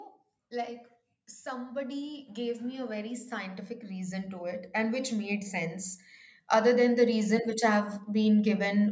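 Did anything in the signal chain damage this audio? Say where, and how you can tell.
Yes: automatic gain rising in the call processing, 1.49–5.87 s (about 9 dB) and 6.50–8.86 s (about 6 dB), where speech and background swell together as AGC chases a quiet input.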